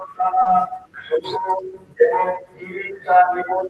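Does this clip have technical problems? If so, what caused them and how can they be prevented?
Yes. At 0.41 to 0.47 s there is a short concealed packet loss: about 40 ms of the speech never reached the decoder in time, so the receiver extended the preceding sound, following its pitch where voiced and using shaped noise where not, before blending back into the real signal. It is heard as a brief smear or wobble. On a spectrogram the harmonics run unnaturally flat and smooth, and the waveform shows a repetitive, slightly decaying stretch. A jitter buffer with more headroom, or a steadier network path, would prevent it.

Overlapping the end of that gap, from 0.45 to 0.47 s, one 20 ms packet is a lost packet rebuilt from error correction. The following packet carried a low-bitrate copy of it (Opus in-band forward error correction), and the decoder played that copy, so there is no silence, but the frame sounds rougher and noisier than its surroundings. 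A spectrogram shows a grainier, less defined band there, and the waveform loses some fine detail. Reducing packet loss on the link would avoid relying on these coarse copies.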